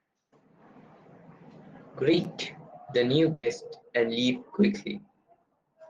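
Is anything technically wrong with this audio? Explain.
Yes. From 3.33 to 3.45 s, after "the new", a burst of packet loss: lost audio was concealed by extending the last sound, fading, for about 100 ms, not left silent. Then "and leave" resumes with about 100 ms skipped.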